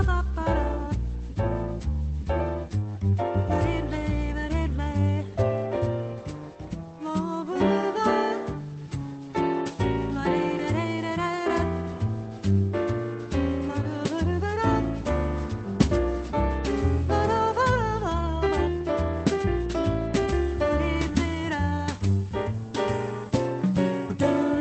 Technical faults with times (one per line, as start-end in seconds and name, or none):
none